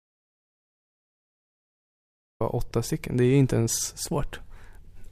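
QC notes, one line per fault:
0.0 to 2.40 s, audio dropout to silence: the speech starts out as silence, with no room tone at all, then cuts in mid-flow, likely a lost input while recording carried on.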